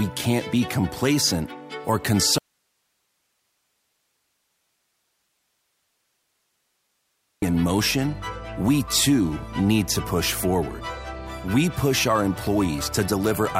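The signal path likely lost its source from 2.38 to 7.42 s while the chain downstream stayed live, an audio dropout to a faint residue. The sound cuts out abruptly for about 5 seconds, leaving only hiss roughly 50 dB below the normal level, then snaps back mid-flow.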